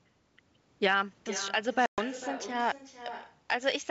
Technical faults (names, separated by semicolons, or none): echo with no canceller; packet loss on an ADPCM call